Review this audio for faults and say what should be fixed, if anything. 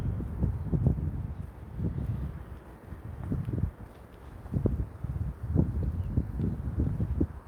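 Nothing in this recording needs fixing, as no faults can be heard at any point. No change to how it was captured or processed is called for.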